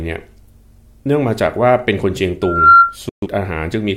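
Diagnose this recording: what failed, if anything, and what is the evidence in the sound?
Two things went wrong here, in different parts of the chain. First, there's a loudspeaker feedback squeal from 2.41 to 2.96 s. A clean tone at 1.4 kHz swells up over roughly a third of a second and ends up around 10 dB louder than the speech. That's the analogue side, really the acoustic path: the mic is hearing the loudspeaker it feeds. At 1.4 kHz the loop gain tips past one, so that frequency keeps feeding itself.

Right after that comes a digital broadcast dropout at the reception end, from 3.09 to 3.27 s. The speech fades out in about 3 ms and stays silent for roughly 128 ms before it returns. That length fits about three lost frames. The receiver either lost the signal or got frames that failed their checks, so it muted until good data came back. Whatever aired during that gap is gone for good.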